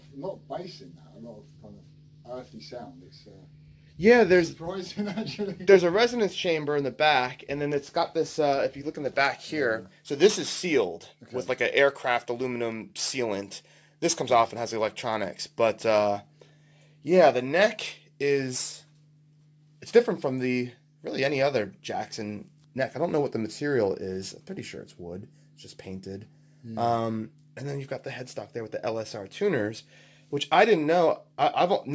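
Aliasing runs through the whole clip. The sample rate was cut without an anti-alias filter, consistent with a drop from 48 kHz to 16 kHz, so content above 8 kHz folds back below it as unrelated tones, sitting well below the main sound. Sibilance and bright transients turn gritty and metallic. Unlike a plain low-pass or codec band limit, the spectrum runs hard right up to 8 kHz instead of rolling off, and the stray pitches do not follow the original ones.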